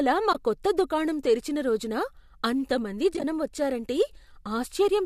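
AAC frame loss with muting at 0.33 to 0.35 s: missing frames were decoded as silence, and the overlapping windows fade the speech out and back in, leaving a soft-edged gap of about 20 ms, consistent with two 10 ms frames. The same fault returns at 3.14 to 3.24 s as several brief dropouts scattered across roughly 100 ms, each only about a frame long, so the sound flutters rather than stopping outright. The short frame length likely comes from low-delay AAC coding, which itself leaves only light roughness on the speech.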